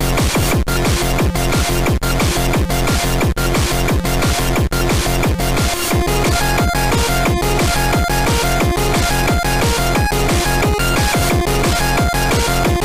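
From 8.31 s to the end, crude rate conversion adds gritty, inharmonic fizz about 20 dB below the sound. Nearest-sample dropping fits a 48 kHz to 44.1 kHz change. On a spectrogram, stray non-harmonic lines appear.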